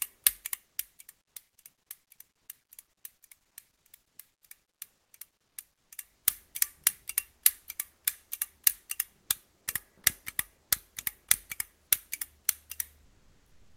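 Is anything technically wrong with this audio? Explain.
Yes. Comfort noise replaces the background twice: from 5.47 to 5.55 s, about 2 dB quieter, and from 13.07 s to the end, about 1 dB quieter. Both sit in low-level passages, likely where Opus DTX halted transmission, so the receiver synthesised steady, featureless noise in place of the real ambience.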